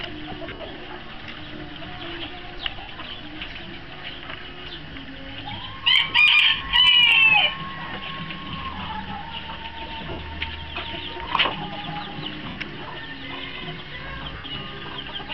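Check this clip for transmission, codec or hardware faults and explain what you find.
Lost LE Audio frames cause seven dropouts, at 0.49–0.75 s (scattered, longest gap around 70 ms), 2.81, 4.92, 6.56, 10.11, 12.49 and 14.34–14.44 s, each losing 30–160 ms of audio. The LC3 decoder fills each gap by repeating the last spectrum with randomised signs and fading it, so tones smear into brief noisy hiss.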